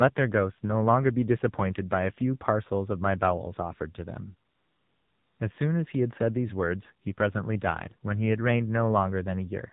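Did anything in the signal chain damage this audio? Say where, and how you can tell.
Yes. At the codec stage, the AMR narrowband mobile codec colours the whole clip. Speech sounds buzzy and synthetic, consistent with a low mode near 7.4 kbps. A spectrogram shows a hard ceiling at 4 kHz and smeared, pulse-driven harmonics.

At the network or call-processing stage, AMR comfort noise fills 4.50 to 5.40 s. For 900 ms no speech frames arrive, so the receiver substitutes smooth generated noise. The waveform shows a flat, even noise floor, and the spectrogram shows a uniform band switching abruptly in and out.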